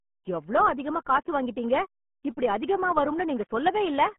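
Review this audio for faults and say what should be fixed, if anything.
The speech carries RealAudio 14.4 codec damage from start to finish. Nothing above about 3.8 kHz survives, and the usable band sits roughly between 150 Hz and 3.4 kHz, like a phone line. The damage is heavy. The speech turns muffled and gargly. That thin, smeared sound fits a codec squeezing audio into about 8 kbit/s, discarding high frequencies and fine detail to fit. To prevent it, record or export at a modern codec and bitrate, and re-source this clip from an uncompressed original if one exists.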